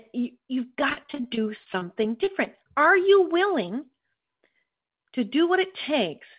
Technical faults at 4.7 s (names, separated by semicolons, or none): none